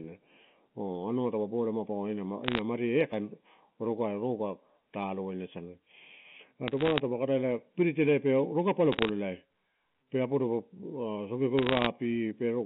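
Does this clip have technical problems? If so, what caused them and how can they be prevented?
Yes, two things. The whole clip is speech with channel delay (comb filtering): one channel is running late by under half a millisecond, and when the two get summed to mono, the shared content cancels at evenly spaced frequencies starting around 1.5 kHz. That's the hollow, slightly phasey colour you hear throughout. To prevent it, time-align the channels, or just take one of them, before folding down to mono.

Then there are bursts of crackle from bit errors on a digital phone line, at 2.44 to 2.59 s right after "ma paua", 6.68 to 7.00 s, 8.92 to 9.09 s, and 11.58 to 11.86 s. The line itself is ordinary G.711 telephone coding, passing roughly 150 Hz to 3.5 kHz. But flipped bits corrupt individual samples, and hits on the sign or high bits come out as sharp ticks layered over the speech. The error rate sounds under one percent. 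The fix is a cleaner link, or a transport with error checking and concealment.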